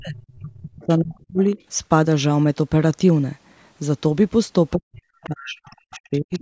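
Speech in a call recording shows speech suppressed in double talk from 0 to 1.4 s and again from 4.75 to 6.4 s. The voice sinks by up to roughly 40 dB, about a second in total in the first stretch and one and a half in the second, most likely because the echo canceller ducked the talker while the far end spoke. The other side's voice leaks through at 1.51–1.63 s, 5.23–5.27 s, 5.67–5.73 s and 6.33–6.41 s as faint, brief scraps, roughly 20 to 35 dB below the talker. This is likely residual loudspeaker echo the canceller failed to remove. The scraps are a second voice rather than a smeared repeat of the talker's own sound, which sets them apart from reverberation. The band stops at 8 kHz, consistent with a 16 kHz sample rate.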